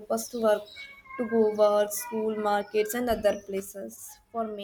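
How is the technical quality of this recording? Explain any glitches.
The recording has one clear glitch near the end. At 3.6 s the speech and background noise drop together by about 6 dB and stay there, a sudden gain jump, likely a digital gain change applied instantly without any ramp.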